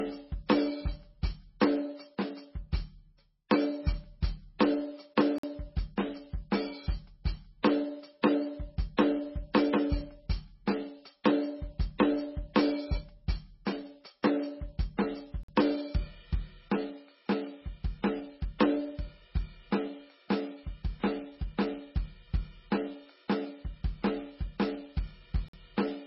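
From the start, the music has a hard ceiling: nothing sounds above 5.6 kHz. The remaining band has a watery, swirling texture, and weak detail flickers in and out. This is likely MP3 compression at a very low bitrate, around 16 kbps. The encoder drops the treble and discards quiet frequency lines from frame to frame. This is heavy codec damage spread evenly through the whole clip, rather than a filter, which would leave a clean dulling with no swirl.

At 5.38 s the sound stops dead for 50 ms and then carries on where it left off. This is a gap between chunks. Silence has been inserted at a join rather than audio being lost, so nothing is skipped. The same hole returns at 15.43 s and 25.48 s, about 10 s apart. That regular 10-second spacing separates it from random dropouts.

At 8.97 s, 9.54 s, 11.24 s and 14.23 s, each sharp attack is preceded by a short hiss lasting 10 to 16 ms, and the hits themselves sound softened. 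This is pre-echo. The codec spreads quantisation noise across a whole block, so noise sized for the loud hit also fills the quiet moment just before it. Unlike a true echo, the smear comes before the attack, not after it. It happens again at 18.59 s, with about 17 ms of smear.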